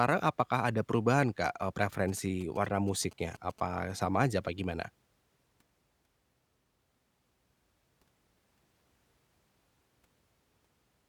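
From 2.09 to 3.60 s, just before "sama aja apa gimana", GSM signalling bursts break into the speech. A nearby 2G handset's radio bursts are rectified by the audio circuitry, giving a galloping dit-dit-dit of short buzzes at 216.7 Hz, roughly 25 dB below the speech.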